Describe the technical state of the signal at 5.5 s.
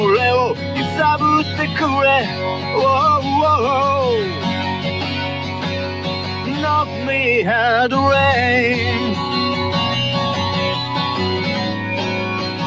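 At 5.5 s the signal sits inside a sound cut by the noise suppressor, running from 5.35 to 5.66 s. The suppressor treated this sound as noise and pulled it down by up to about 5 dB for roughly a third of a second, so the sound sinks and its tail is clipped short.

This happens against a speech-tuned noise suppressor applied to music or sounds for the whole clip. It reads sustained content and ambience as noise, so gain swings by around 10 dB. Transients pass while held portions dip, giving a pumping, thinned character around this moment.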